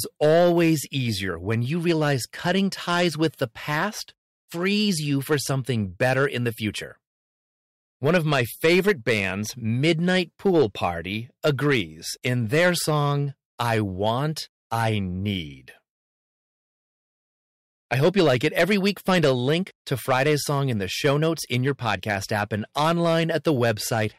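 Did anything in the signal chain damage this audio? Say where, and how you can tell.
Yes. Hard clipping runs through the whole speech clip. The loudest syllables come out with a harsh, fuzzy edge. The signal was driven about 8 dB past what one stage could pass, likely the converter or a fixed-point format conversion. Roughly 1.5% of samples were cut flat, adding high harmonics.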